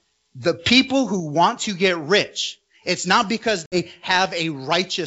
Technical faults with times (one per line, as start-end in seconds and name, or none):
3.66-3.80 packet loss on an ADPCM call